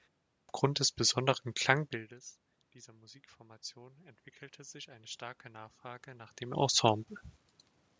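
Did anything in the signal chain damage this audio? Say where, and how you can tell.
Yes. At playback, a clipped start after a pause: the output device dozed through the opening 0.34 s of silence and needed time to wake, so about 150 ms of sound from 0.34 to 0.49 s is swallowed. The speech enters abruptly with "des besonderen", its onset missing.

In call processing, automatic gain rising: after the input level fell by about 22 dB, the gain control climbed by about 7 dB from 2.99 to 7.13 s. Voice and room background swell together slowly, rather than the level changing at the microphone.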